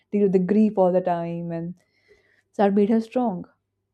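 No audible technical faults are present in this speech recording.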